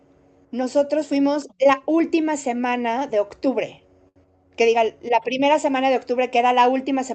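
At 4.08–4.18 s a short stall from a late packet holds the speech for about 74 ms. The jitter buffer ran dry and stretched the last sound, so nothing is lost, but playback now runs 74 ms later.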